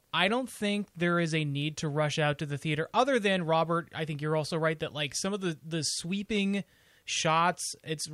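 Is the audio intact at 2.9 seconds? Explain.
No. At 2.9 seconds the speech carries clock slip clicks, which run from about 0.16 s to 8.09 s. Two devices are likely free-running on separate clocks, off by a few hundred parts per million, so a single sample is dropped or repeated roughly every 70 ms. The result is a faint, evenly spaced ticking or soft rattle riding on louder passages and vanishing in pauses. That strict regularity and the one-sample size set it apart from random crackle or packet-loss dropouts.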